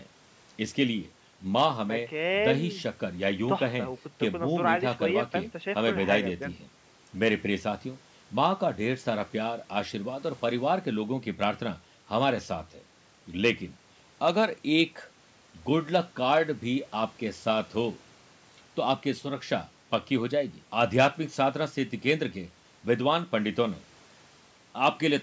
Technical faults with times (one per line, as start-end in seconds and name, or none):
none